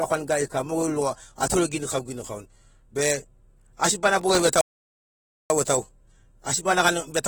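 The whole speech clip sounds dull and smeared with a fizzy edge and nothing above 19.4 kHz, likely AAC compression at a low bitrate around 28 kbps. From 4.21 to 4.40 s there's processor overload crackle: a handful of very short buffers miss their deadlines and replay stale audio, giving a gritty tearing. Then at 4.61 s a playback stall drops everything to silence for 0.89 s before the sound picks up again at 5.5 s.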